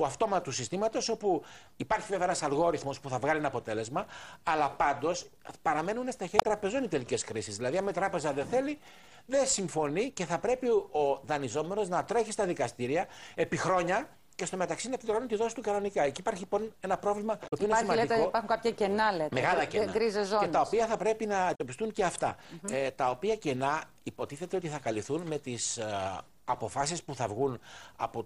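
Around 6.36 to 6.45 s, 17.44 to 17.53 s and 21.51 to 21.61 s you get a short chirp, squawk, click or hole, each lasting roughly a tenth of a second. That's damaged data in a compressed stream: a stretch of the encoded bytes is corrupt, so the decoder misreads those frames, drops out of sync and has to hunt for the next valid frame header before the sound comes back clean.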